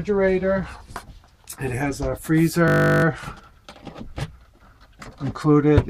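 From 2.68 s to 3.04 s the sound gives way to a steady, mechanical buzz at 50 Hz, a flat tone with no movement in it. This is a system hang loop. For a moment the computer or audio driver stopped supplying new samples, while the sound hardware kept replaying the last 20 ms block in its ring buffer. That block repeats 18 times, and repetition that short fuses into a tone. Playback then resumes with essentially nothing missing.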